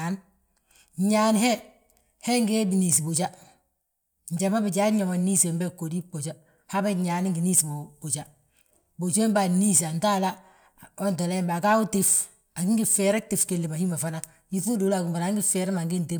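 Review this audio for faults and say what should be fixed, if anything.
Nothing stood out on listening to this speech clip, so there is nothing to fix.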